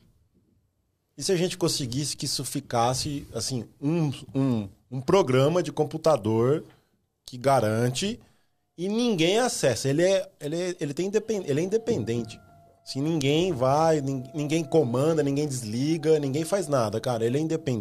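No technical faults can be heard anywhere here.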